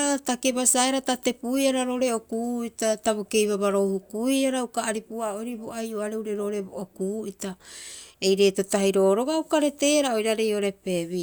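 Listening through the speech recording, nothing stood out as a technical problem at any point.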